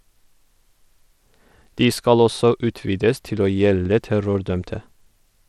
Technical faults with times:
0.00-5.48 Bluetooth SBC compression

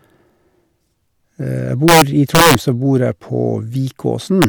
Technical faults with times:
1.88-2.55 integer overflow
4.42-4.44 integer overflow

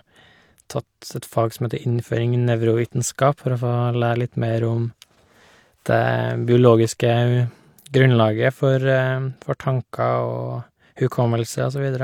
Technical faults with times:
none

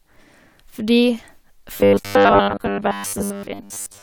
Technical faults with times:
1.74-4.02 robotic sound from repeated short buffers

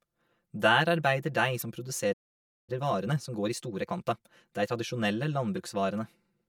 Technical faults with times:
0.00-6.48 channel delay (comb filtering)
1.58-1.63 damaged data in a compressed stream
2.13-2.70 playback stall
2.70-4.88 time-compressed catch-up
5.54-5.58 damaged data in a compressed stream

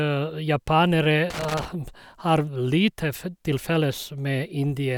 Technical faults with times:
1.30-1.65 loose connector crackle

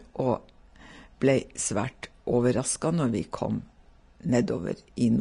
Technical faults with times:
0.00-5.21 Vorbis compression

